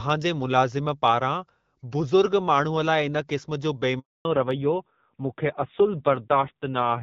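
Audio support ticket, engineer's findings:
Sound cuts out at 3.99 s, silent for 260 ms until 4.25 s, with no tail beyond a few tens of milliseconds. Handover gap: network switch mid-call, no speech frames delivered during transfer, content in that window lost.

From 4.25 s to end: band-limited, dull, rougher speech, nothing above 4 kHz. Fallback to narrowband after the handover; the earlier HD Voice (AMR-WB) segment sounds lightly coded but wideband. The roughness fits a low AMR-NB rate, near 5.9 kbit/s.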